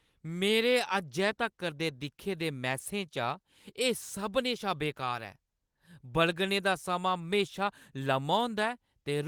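Speech coded with Opus voice compression, its band reaching up to about 20 kHz, with no technical fault present.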